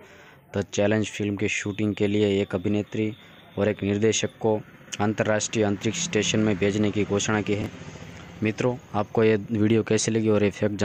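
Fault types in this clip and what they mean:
Chunks out of order at 7.62 to 7.66 s: one 20 ms chunk plays a chunk late, swapping with its neighbour and leaving a brief jumbled moment.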